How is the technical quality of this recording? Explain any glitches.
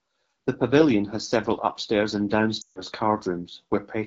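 The recording has clear technical problems: plainly audible codec coloring throughout and one dropout in the speech.

The first problem, present for the whole clip, is the AMR wideband (HD Voice) codec. The speech has a rough, raspy, buzzy quality, which fits AMR-WB at a low rate such as 8.85 kbit/s. At that rate the pulse-excited vocal tract model can't follow the voice closely, so it loses fine detail. On a spectrogram the harmonics look smeared. Content stops near 7 kHz, and between 6.4 and 7 kHz there is a band of diffuse noise instead of structured harmonics.

The second problem is lost AMR speech frames, from 2.61 to 2.82 s. For about 140 ms the decoder rebuilt the missing audio by reusing the last good pitch and vocal tract settings with falling gain, which fits roughly seven consecutive lost frames. The sound drops to near silence within two frames. When the speech returns it is weak and rough for a moment. 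On a spectrogram, harmonics quickly fade into a near-blank patch. In the waveform, the envelope decays smoothly toward zero and then recovers.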